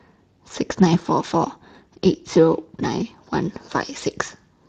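From start to finish the speech carries plainly audible Speex codec damage. Speex is a CELP coder. It rebuilds the voice from a predicted spectral shape plus a coded excitation signal. Here the excitation gets too few bits. The result is a hoarse, noisy texture laid over every syllable. The degree of damage points to a middling rate, around 22 kbps.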